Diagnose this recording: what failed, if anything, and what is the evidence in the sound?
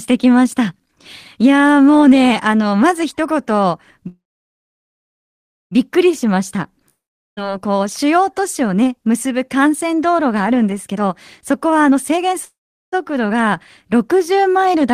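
Call audio freeze at 4.07 to 5.73 s and again at 12.45 to 12.94 s, at the network and jitter-buffer stage. Each time the last sound is stretched into a brief fading buzz, then held as silence, about 1.5 s in the first and about 0.4 s in the second. The speech then resumes exactly where it stopped, with nothing skipped. This is likely packets arriving late so that the jitter buffer ran dry. The wait is inserted into the stream, adding about 1.6 s and then 0.48 s of delay.

Long network dropout at 6.89 to 7.39 s, also a network fault. The audio trails off into a short fading buzz, then goes silent for about 0.42 s. When the speech returns it has jumped ahead, and roughly 0.48 s of it never plays. Unlike the freezes, the likely cause here is lost packets rather than delayed ones. The receiver could only conceal the hole and then rejoin the stream further on, so that stretch of speech is gone.

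Jitter buffer speed-up from 10.89 to 12.35 s, in the receiver's buffer management. The speech runs at about 129% of normal rate and sounds hurried, but its pitch is unchanged. The buffer had built up more audio than its target, and to shed that backlog it cut out many short pitch-period slices in succession, removing roughly 0.4 s in total. This removes time without shifting pitch, which is why the voice sounds rushed rather than higher.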